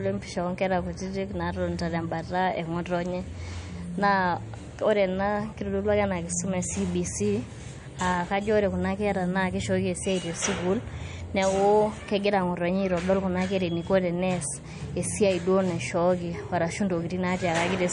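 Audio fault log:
Throughout, MP3 compression: nothing reaches above 10.6 kHz, so the treble is sliced off flat, and the remaining upper detail turns watery and swirly, with s sounds chirping metallically and attacks smeared. The damage is plainly audible, likely from a starved MP3 encoder at a low bitrate around 40 kbps. On a spectrogram a hard horizontal ceiling sits at 10.6 kHz, with patchy, flickering holes beneath it where weak frequency lines drop out frame to frame.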